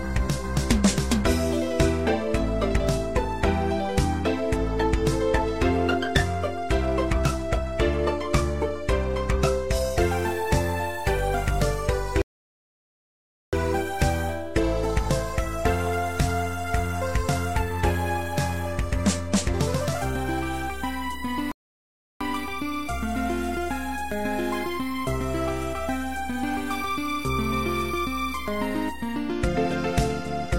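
At 12.22 s the sound cuts to dead silence until 13.53 s, then picks up exactly where it stopped. At 21.52 s a second gap runs to 22.21 s. Both are rebuffering stalls: the player ran dry of downloaded audio and waited, adding 1.31 s and 0.69 s without losing anything. On the waveform each shows as a flat line between intact edges; the spectrogram shows clean blank columns across all frequencies.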